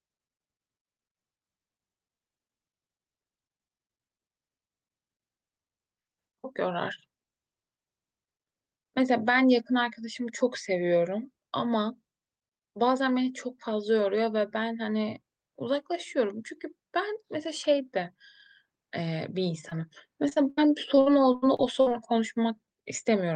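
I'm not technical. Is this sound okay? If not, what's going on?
No. Short concealed packet loss happens around 19.69 s, and again from 20.29 to 20.39 s. Tiny pieces of the speech, about 20 ms each, never arrived, so the receiver patched each hole by stretching the previous sound, leaving a brief smear or wobble.

A burst of packet loss follows from 20.49 to 20.59 s. About 80 ms went missing in one go, so the last sound was held and faded out as a short buzz or hiss before the speech picked up further along.

Repeated packet loss (robotic sound) runs from 20.95 to 21.92 s. Seven separate gaps, the longest about 59 ms, were each patched the same way, covering about a quarter of that stretch. The speech there sounds choppy, with bits missing.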